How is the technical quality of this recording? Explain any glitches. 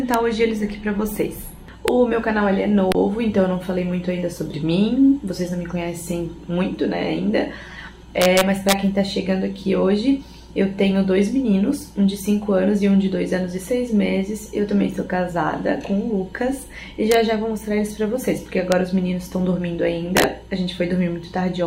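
The recording has a repeated integer overflow fault. Sharp cracks occur at 0.14, 1.88, 2.92, 8.22 to 8.73, 17.12 to 17.14, 18.72 and 20.17 to 20.24 s. Loud peaks exceed the largest integer and wrap to the opposite sign instead of limiting. The longest bursts, overdriven by about 3 dB and 5 dB, crackle harshly, far sharper than clipping.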